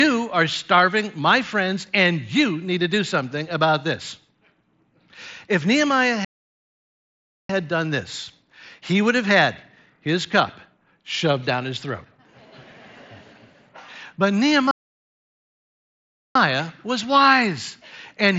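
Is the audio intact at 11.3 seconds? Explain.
Yes, the audio is intact at 11.3 seconds, with no fault there; it simply carries the band limit of the mSBC Bluetooth headset path, so nothing is heard above about 8 kHz.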